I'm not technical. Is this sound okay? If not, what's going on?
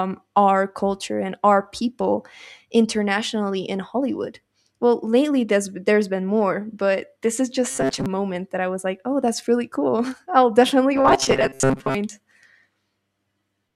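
No. Robotic sound from repeated short buffers at 7.69 to 8.06 s, between "more but this is" and "moment that i was", and again at 10.97 to 11.95 s, after "i'll definitely". The voice turns into a stiff metallic buzz at 134 Hz. Likely, audio arrived too slowly and tiny slices of about 7.5 ms were replayed, covering roughly half of the first stretch and most of the second.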